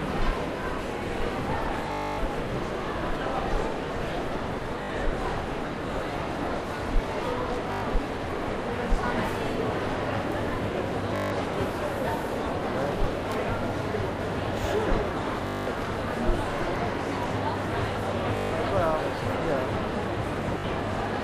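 Bluetooth stutter hits at 1.92, 4.83, 7.72, 11.16, 15.47, 18.37 and 20.58 s, lasting 61 to 264 ms. Lost or late packets make the receiver replay one short slice as a buzz. The sound then jumps ahead, unlike a silent dropout.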